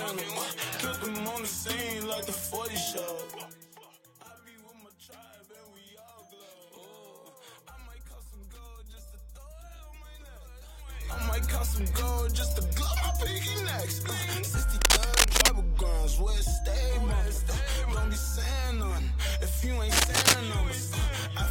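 At 14.81 to 15.49 s, and again at 19.92 to 20.35 s, there's a burst of cable scratch noise: dense, uneven crackling and rustling that sits a bit louder than the sound itself. It's likely a worn cable or connector being moved, its contact resistance jumping around.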